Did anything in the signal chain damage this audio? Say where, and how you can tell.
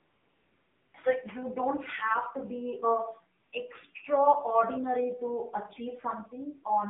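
Yes. At the codec stage, AMR-NB narrowband coding runs throughout: the band stops near 200 Hz and 3.5 kHz, and the buzzy, synthetic timbre fits a low mode around 7.4 kbps, not simple filtering.

AMR comfort noise fills 0.0 to 0.94 s and 3.40 to 3.52 s, just before "extraordinary to". The background turns into steady, smooth synthetic noise that switches in, unlike a gate's true silence.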